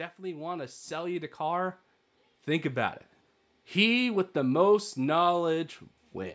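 Speech with automatic gain rising from 0.17 to 4.04 s: the level climbs about 9 dB, leveling off before "with the most". Voice and background swell together over several seconds, so it is the input gain being raised, not a compressor reacting to loud syllables.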